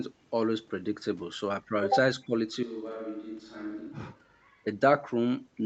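From 2.16 to 2.33 s the speech dips by roughly 10 dB in short pieces, likely speech suppressed in double talk, with the echo canceller ducking the talker while the far side spoke. Then from 2.63 to 4.66 s it abruptly turns roomy and hollow, about 10 dB quieter with more background noise, likely a switch to a distant microphone.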